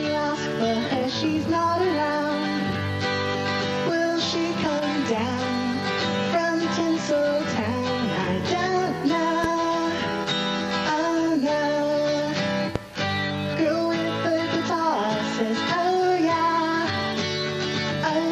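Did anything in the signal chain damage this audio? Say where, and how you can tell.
Yes. A sudden voltage step most likely entered in the analogue wiring, from a plug, a switch or a static discharge, and the circuits after it shaped it into a brief pulse added on top of the signal. The result is a loud pop, heard twice, from 9.44 to 9.48 s and from 12.76 to 12.80 s. Each is a single sharp hit about 15 dB above the surrounding sound, which carries on uninterrupted underneath.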